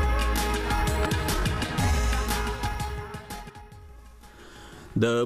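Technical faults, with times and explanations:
1.05–1.07 s and 3.49–3.51 s, compressed frames skipped: at each point the audio jumps forward by roughly a tenth of a second, with about four frames lost from the compressed stream, either absent from the file or rejected by the decoder as damaged. Each frame spans 23.2 ms, which fits 1024-sample frames at 44.1 kHz.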